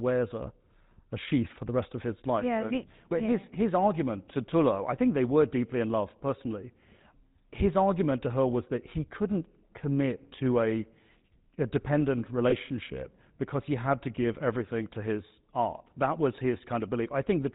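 From start to finish the speech carries GSM full-rate codec damage, and it is plainly audible. The coder models the vocal tract and drives it with sparse, regular pulses. Nothing above 4 kHz survives. Voices take on a buzzy, gravelly roughness. The sound fits a 13 kbps full-rate coder.

From 12.5 to 12.54 s, just after "a dependent", there are lost GSM frames. The decoder repeats the settings of the last good frame. That brief gap becomes a short, rough, metallic ring. Its length points to a single lost 20 ms frame.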